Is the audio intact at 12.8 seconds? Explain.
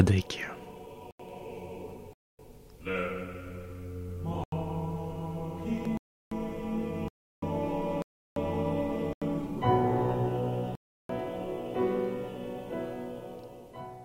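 Yes, at 12.8 seconds the audio is intact, with no dropout, distortion or other fault at that moment.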